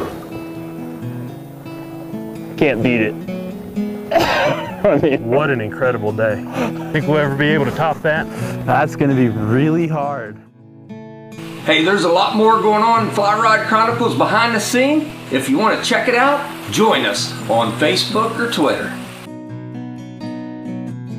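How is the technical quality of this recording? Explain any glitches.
One glitch stands out: a DC step at 15.10 s. The waveform's zero line jumps by about -27 dBFS, then drains away through a 20 Hz high-pass in the path. The sudden offset registers as a short low thump while the sound carries on unchanged.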